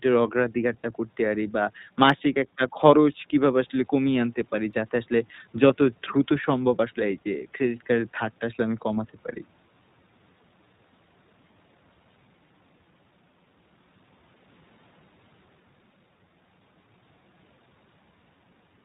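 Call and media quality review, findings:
iLBC codec, whole clip. Band-limited speech, nothing above 4 kHz. Rough, slightly synthetic texture, plainly audible. Codec is coding each 20 ms frame independently, which fits iLBC's 15.2 kbps mode.

Lost iLBC frames, 0.82–0.85 s and 5.68–5.71 s. Brief held, buzzy vowel, about 20 ms each, which fits one lost frame. Decoder repeats the last pitch cycle with added noise. Speech recovers immediately afterward because frames decode independently.

Single sharp click at 2.10 s. Likely dropped samples: a tiny fraction of a millisecond missing from the stream. Waveform jumps to a later value, producing a thin broadband line. No audible content lost.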